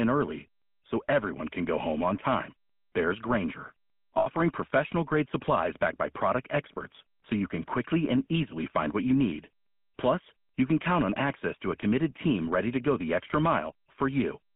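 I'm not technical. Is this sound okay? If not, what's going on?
No, it has two problems. The first runs through the whole recording: the speech sounds buzzy, gravelly and boxed-in, like an older mobile phone call. That is the GSM full-rate codec, the original mobile-phone compression. It rebuilds the voice from a simplified model driven by coarse, evenly spaced pulses, which gives the rough buzz, and it discards everything above about 3.5 kHz, so the crisp, airy part of the voice is missing.

The second is brief. From 4.18 to 4.28 s, just before "professional grade supplies backed", the sound freezes into a short, rough metallic ring for about a tenth of a second. That is lost GSM frames. A few small chunks of the signal never arrived intact, and the phone filled the gap by repeating the last good chunk. That produces the ringing smear instead of real speech.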